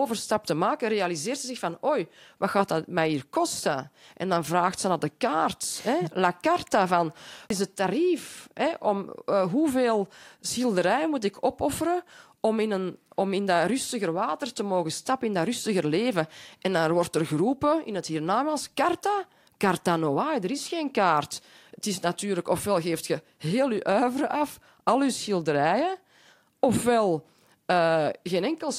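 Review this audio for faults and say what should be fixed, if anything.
A CD skip occurs at 7.49 s, between "carta van" and "is het tarief". The sound drops out for a very brief moment with a small tick. Playback then resumes from a different point in the speech. This happens when the laser is knocked or hits a flaw and lands on another turn of the disc's spiral. The player mutes while it relocks, then carries on from the new position. The fix is to re-extract this passage from the disc. Ripping with a secure, error-checking method from a clean disc on a stable surface prevents this.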